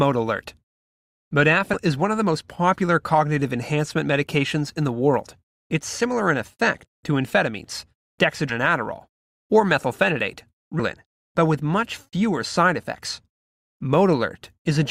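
Compressed frames skipped: runs of 20 ms frames never reach the output, so the speech jumps ahead by about a fifth of a second at 1.73–1.76 s and roughly 150 ms at 8.49–8.53 s and 10.8 s.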